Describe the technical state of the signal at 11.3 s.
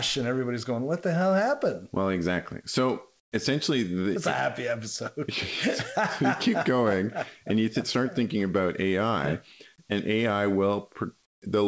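At 11.3 s the background is replaced by comfort noise, from 11.26 to 11.42 s. The real ambience gives way to a flat, featureless hiss about 23 dB quieter. This likely comes from discontinuous transmission, with the receiver synthesising filler while the sender paused.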